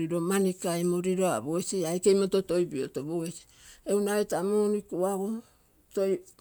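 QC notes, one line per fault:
No faults detected.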